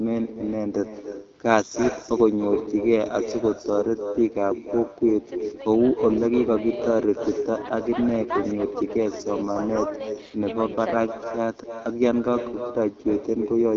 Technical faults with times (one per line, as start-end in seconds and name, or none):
0.00-13.77 echo with no canceller
0.00-13.77 AMR wideband (HD Voice) codec